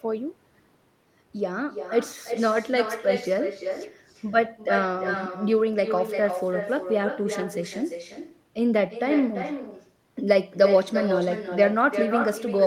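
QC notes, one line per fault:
Throughout: echo with no canceller. The far end's loudspeaker feeds its microphone, returning the speech roughly 300 ms later as a thinner copy about 7 dB down.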